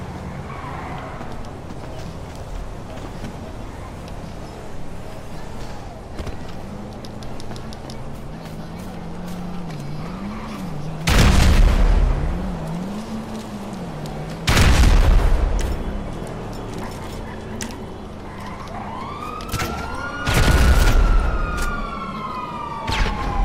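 Hard clipping occurs at 11.08–12.11 s, 14.48–15.44 s and 20.35–21.18 s, overdriven about 7, 9 and 6 dB. A stage ran out of range and cut peaks flat, adding high harmonics heard as fuzz on loud sound. Unlike soft saturation, it starts abruptly.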